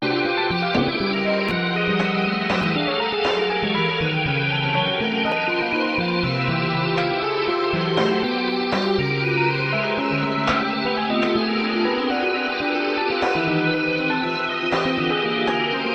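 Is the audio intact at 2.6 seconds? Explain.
No. From 2.61 to 2.64 s the chunks are out of order: one 11.6 ms chunk arrives a chunk late and plays after its successor. It sounds like a brief jumbled blip. Unlike a dropout, no audio is lost.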